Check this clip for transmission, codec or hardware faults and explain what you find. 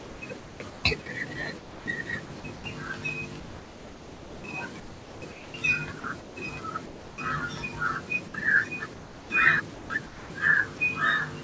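Yes, there are faults: the speech is repeatedly gated by a voice detector, in two forms, heard against a call path whose band stops at 8 kHz and room noise about 41 dB below the speech.

Sound chopped by the voice detector occurs from 0.00 to 1.06 s, 1.58 to 2.64 s, 3.40 to 7.18 s and 8.94 to 10.80 s. The sender's detector likely switched on and off several times, so quiet parts were swapped for comfort noise. About 2.2 s of the longest stretch is replaced.

Sound dropped by the voice detector occurs from 8.28 to 8.34 s and at 11.44 s. Each is a single cut that was likely caused by the detector deciding the sound was background. It gives way to one steady patch of comfort noise rather than repeated flicker.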